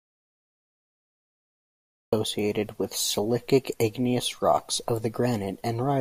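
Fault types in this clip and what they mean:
Audio dropout to silence: the input signal was likely lost, with the recorder writing silence in its place. The clip begins inside this gap, in silence with no room tone, and speech only cuts in at 2.13 s. Anything before that is gone.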